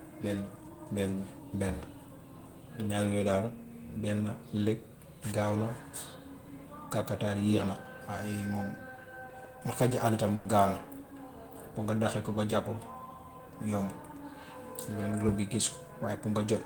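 At 10.35 s, lasting about 0.12 s, a call audio freeze holds the speech: the last sound smears into a short fading buzz or hiss, then resumes exactly where it stopped, now 100 ms later. This is likely a jitter buffer running dry. Spectrograms show horizontally stretched bands; waveforms show a decaying, repetitive stretch.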